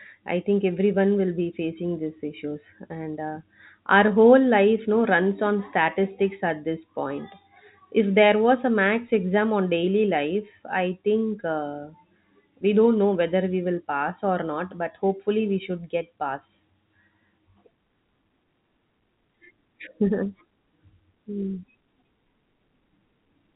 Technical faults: none

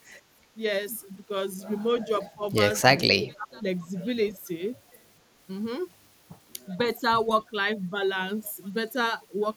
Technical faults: speech suppressed in double talk; echo leak

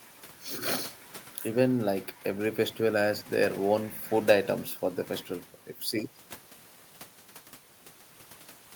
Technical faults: none

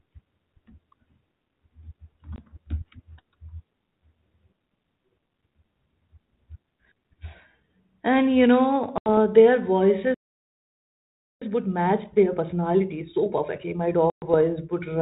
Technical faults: packet loss on an ADPCM call; playback stall; time-compressed catch-up

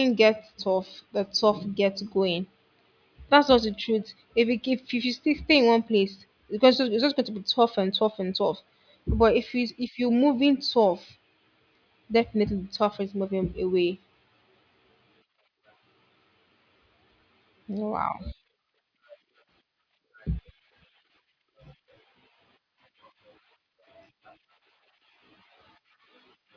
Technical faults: none

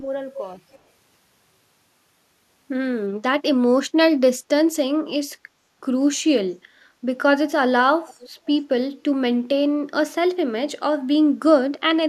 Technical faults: speech suppressed in double talk; echo leak; background gated by the echo canceller

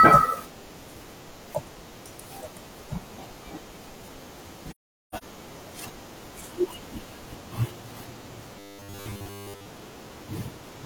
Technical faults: AAC frame loss with muting; robotic sound from repeated short buffers

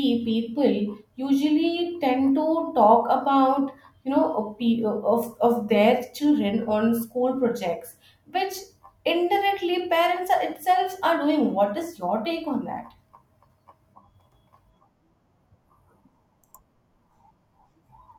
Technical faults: block of digital silence

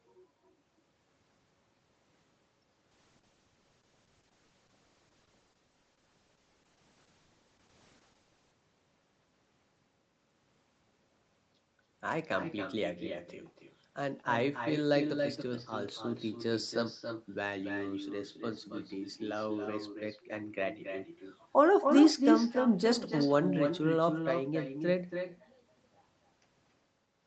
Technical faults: echo with no canceller; call bitrate drop

